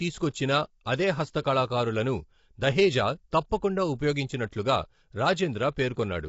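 Throughout, likely low-delay AAC compression at a rate fitting about 24 kbps leaves the speech plainly rough and grainy, with nothing above 7.7 kHz.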